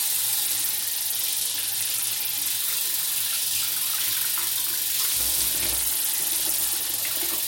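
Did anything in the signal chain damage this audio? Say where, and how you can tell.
Yes, a Bluetooth SBC bit pool drop at the codec stage, from 0.45 to 2.50 s and from 5.53 to 7.02 s. On a spectrogram the top bands go bare and grainy noise fills the rest. The treble dulls and gritty noise rises, which fits the bit pool falling from 28 to about 11 (roughly 90 kbps) on a congested link.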